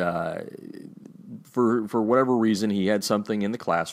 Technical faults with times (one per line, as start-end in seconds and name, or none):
none